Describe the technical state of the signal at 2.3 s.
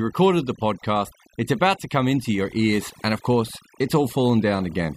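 At 2.3 s the speech carries overdone noise removal, present across the whole clip: bands near the noise estimate are gated away, leaving near-silent gaps with twinkling specks. Unlike codec smearing, the swirling artefacts cluster where the background was.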